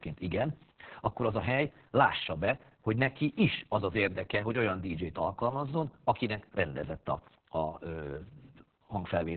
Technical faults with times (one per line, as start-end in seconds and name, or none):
0.00-9.37 Opus voice compression